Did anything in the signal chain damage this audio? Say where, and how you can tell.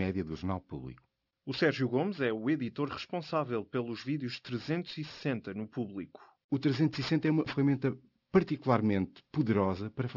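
Yes. The damage is at a sample-rate conversion step, where the audio was decimated with no effective anti-aliasing filter, causing aliasing throughout the speech. The spectrum runs hard up to a 6 kHz edge, which fits a drop from 48 kHz to 12 kHz. Energy above 6 kHz folds back as unrelated tones, roughly 20 dB below the signal, so sibilants sound gritty and metallic from start to finish.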